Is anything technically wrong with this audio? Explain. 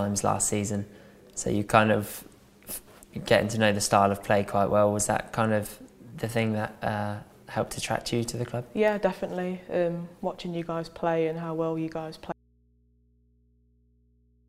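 Yes. At 12.32 s the sound cuts out abruptly in mid-flow and never returns, so the rest of the clip holds only a low mains hum, roughly 40 dB below the earlier level. This is an audio dropout to a faint residue. The wanted signal was likely lost upstream while the path after the break stayed live, so the open input kept passing its own hum. The switch is instant, unlike a pause or a fade.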